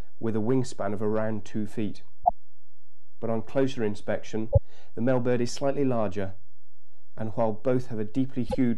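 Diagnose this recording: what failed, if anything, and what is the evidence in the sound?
The failure is in the codec stage: damaged data in a compressed stream. Three short disruptions break in at 2.21 to 2.31 s, 4.48 to 4.58 s and 8.45 to 8.55 s. Each lasts about a tenth of a second. The bytes in those stretches were wrong. The decoder misread or rejected the affected frames and lost sync. It then hunted for the next valid frame header, so the sound resumes after each burst.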